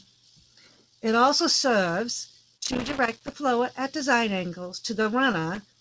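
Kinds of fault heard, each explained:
Loose connector crackle: a worn or dirty contact is making and breaking as it shifts, chopping the signal and adding pops from any DC on the line. Here it comes as irregular bursts of crackle and scratching from 2.57 to 3.34 s, and again from 5.55 s to the end.
Short stall from a late packet: a packet arrived late and the jitter buffer ran dry, so the receiver held the last sound for 28 ms before carrying on. Nothing is lost, but at 5.02 s one moment of speech is stretched briefly with a slight buzz or dip.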